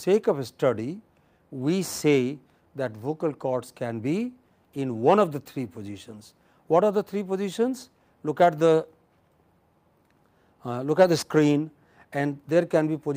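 No technical faults are audible anywhere in the recording.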